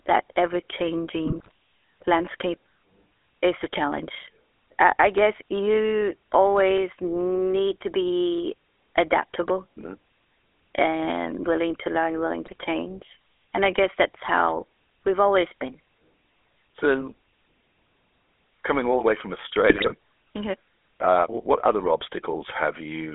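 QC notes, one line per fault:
throughout: GSM full-rate codec. The audio is confined to roughly 300 Hz to 3.5 kHz and carries a steady buzzy, gravelly roughness, from pulse-driven vocal-tract modelling at a rate that fits 13 kbps. Unlike bit errors, this coloring is constant, not bursty.
1.25–1.51 s, 12.46–12.56 s, 19.70–19.94 s: GSM bit errors. Brief bursts of squawks, pops and gargling, where corrupted filter, pitch or gain values warp the spectrum or spike the level frame by frame. Unlike the steady codec roughness, these are sudden and short.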